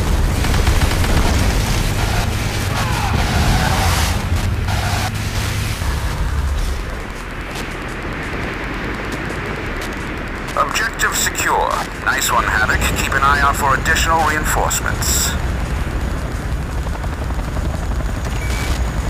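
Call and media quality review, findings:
Steady ticking about ten times a second, throughout, roughly 20 dB under the audio. Wi-Fi interference: a nearby Wi-Fi radio's beacon, one every 102.4 ms, picked up and rectified by the analogue audio circuit. Probable component: audio circuit close to the Wi-Fi radio.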